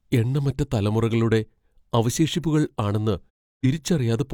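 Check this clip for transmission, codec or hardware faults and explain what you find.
There is one fault, a digital broadcast dropout. Just after "എണ്ണമറ്റ തലമുറകളുടെ അവശേഷിപ്പുകൾ ആണെന്ന്", the speech fades out over 20 ms at 3.29 s and is silent until 3.66 s. The receiver muted on corrupt or missing frames. About 0.3 s of programme is gone, which fits roughly seven lost frames.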